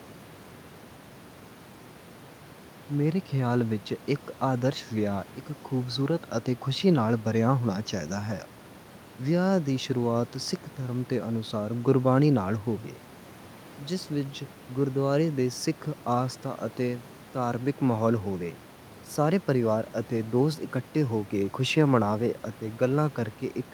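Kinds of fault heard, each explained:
No kinds of fault are heard in this speech, and the room noise sits about 23 dB below it.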